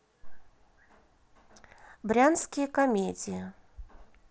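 No technical faults can be heard in this speech clip. It carries the sound of a Bluetooth mSBC headset codec working as intended, with speech band-limited to about 8 kHz and only a light codec graininess.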